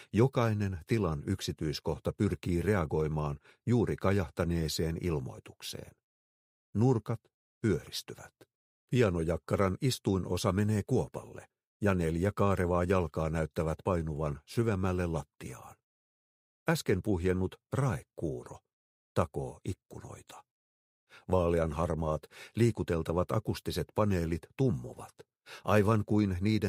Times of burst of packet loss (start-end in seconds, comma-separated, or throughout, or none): none